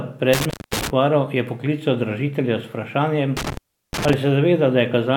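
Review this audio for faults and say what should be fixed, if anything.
There's an intermittent contact twice in this speech, between 0.33 and 0.90 s and again between 3.37 and 4.14 s: a loose plug or cable briefly opens, cutting the signal for about 230 ms and then 360 ms, with crackle at each edge. Reseat or replace that cable and check the connectors before the next take.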